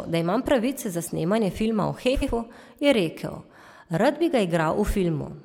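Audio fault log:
2.14–2.30 s, frames out of order: here two neighbouring blocks of roughly 70 ms each got swapped, so that short stretch plays with its back half first and its front half second. You hear a quick garbled flutter. The block length fits runs of three codec frames arriving in the wrong order. Nothing is missing, and the timing afterwards stays intact.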